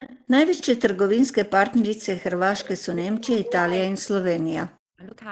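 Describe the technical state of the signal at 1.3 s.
At 1.3 s the speech comes through intact, with no fault at that moment beyond the ordinary band limit and coding texture of the call path.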